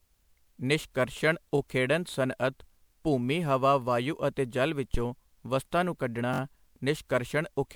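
Across the whole speech clip the sound is swirly, smeared and hollow, with soft, blurred consonant attacks, beyond what a single lossy encode would produce. Content extends up to about 20.9 kHz. This is likely generation loss: the audio appears to have been decoded and re-encoded several times with MP3, which points to 128 kbit/s. Each pass quantises again on a shifted frame grid, so coding noise and spectral holes build up.

At 1.58 to 1.60 s there is a brief buzzy stutter where a tiny fragment sounds twice with a hard join. This is a repeated buffer. Fresh audio was late, so the device replayed its last block once. The 21.33 ms repeat length fits a 1024-sample buffer, and no audio appears to be skipped. The block is so short that the repeat reads as a click-like buzz rather than an audible echo.

At 4.94 to 5.05 s a deep, low thump sounds and dies away in about 23 ms. This is a phantom power thump. 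A supply was switched on or off on a live input, and the sudden voltage step travelled through the coupling capacitors as a low-frequency pulse.

At 6.34 to 6.40 s a second repeated buffer gives a longer, rattling stutter. The same 21.33 ms block plays three extra times in a row, each with a hard seam. This again points to a 1024-sample buffer, with no audio apparently lost.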